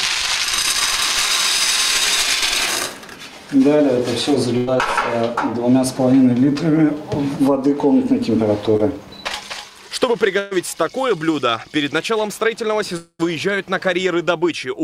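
At 4.57 to 4.69 s there's a burst of packet loss: about 100 ms never arrived, the receiver stretched the last sound into a fading tail, and the audio picks up further on. A short concealed packet loss at 8.77 to 8.81 s drops roughly 20 ms, patched over so it comes across as a quick smear. Another burst at 10.39 to 10.53 s loses about 120 ms, again a held, decaying fill before the audio skips ahead. At 12.97 to 13.21 s roughly 220 ms goes missing, likely a long network dropout: the fill fades out, leaving about 60 ms of silence before the audio resumes past the gap.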